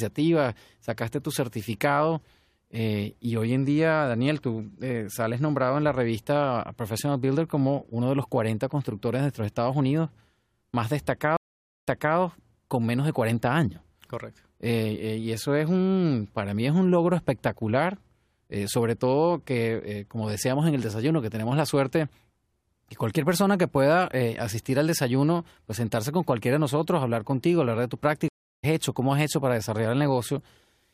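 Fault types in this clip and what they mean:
Stream reconnect: The connection dropped, and the player restarted its decoder mid-stream. At 11.37 s the speech stops for 0.5 s, then resumes 0.3 s earlier, repeating a moment. At 28.28 s, a 0.35 s gap skips roughly 0.3 s ahead.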